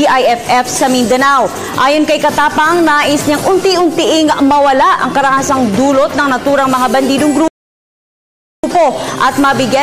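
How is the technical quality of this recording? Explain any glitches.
There's one glitch worth flagging: a rebuffering stall from 7.48 to 8.64 s. The audio just drops to dead silence for about 1.16 s, then picks up exactly where it left off, with nothing skipped. That's the player running dry on downloaded audio and sitting there until the next chunk shows up. Nothing gets lost, but the pause stretches the timeline and breaks the flow.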